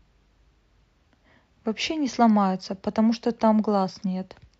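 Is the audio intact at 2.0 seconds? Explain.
Yes, the audio is intact at 2.0 seconds, with no fault present at that moment.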